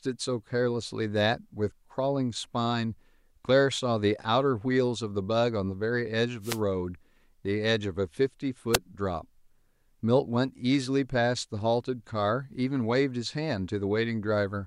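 An analogue FM wireless microphone loses signal strength as reflected paths cancel, so receiver noise rises and breaks through this speech clip as two wireless microphone noise hits: a swish of static from 6.41 to 6.60 s, then a brief burst at 8.73 to 8.77 s.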